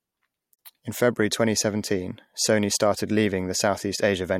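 At 0.55 s the speech drops out for about 42 ms, until 0.59 s. This is a gap at a join of encoded pieces. Separately encoded sections were butted together untrimmed, leaving encoder delay and end padding. The silence has smeared edges, then speech resumes where it stopped.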